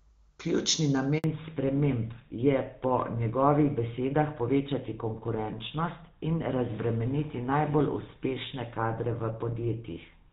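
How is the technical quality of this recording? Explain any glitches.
The recording has two faults, both at the same moment early in the speech, and the second lasts to the end.

From 1.18 to 1.24 s there is a handover gap: the call was passed between networks, and for about 60 ms no speech frames arrived. The voice dies away within a few tens of milliseconds, leaving a brief hole in the speech. On a waveform this appears as a flat stretch, and on a spectrogram as a narrow vertical band of silence across all frequencies.

From 1.24 s onward the call falls back to narrowband. The wideband sound before the gap fits HD Voice (AMR-WB) at a high rate, and afterwards the switch appears to be to an older GSM full-rate codec. Nothing above 4 kHz remains, so the speech sounds duller and rougher. On a spectrogram the upper energy stops sharply at a hard horizontal ceiling at 4 kHz.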